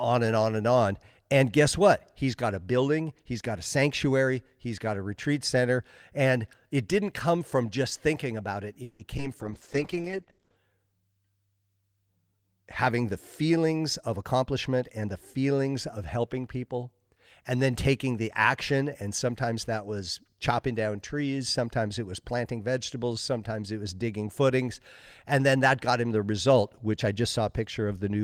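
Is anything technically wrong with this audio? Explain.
Yes, there are four call-transport problems packed into the middle of this speech.

At 8.83 to 9.01 s, right after "just thinking about it", there's a call audio freeze. The last sound hangs on as a fading buzz for about 160 ms, likely because delayed packets emptied the jitter buffer. Nothing gets lost, but the speech now runs 160 ms late.

Just after that, from 9.17 to 9.20 s, there's a short concealed packet loss. About 20 ms never arrived, so the decoder patched over it, leaving a quick smear.

From 9.42 to 10.64 s, a call bitrate drop takes the encoder from 32 to 9 kbps, and the bandwidth shrinks from 20 kHz to 8 kHz. The speech turns muffled and rough until the rate recovers.

Between "having the" and "of helping people and", from 13.42 to 15.38 s, a jitter buffer speed-up trims pitch-period slices, about a seventh of a second in total. 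Speech runs at roughly 107% speed with unchanged pitch, so it sounds hurried.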